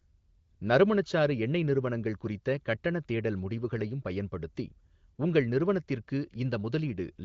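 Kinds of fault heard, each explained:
No faults heard: the speech sits on an AMR wideband (HD Voice) path consistent with a high mode around 18.25 kbit/s, with content stopping at 7.5 kHz as expected for that codec.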